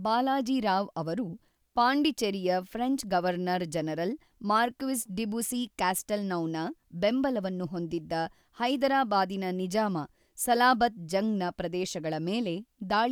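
Nothing in this speech recording stands out as a technical fault, so there's nothing to flag at any point along the way.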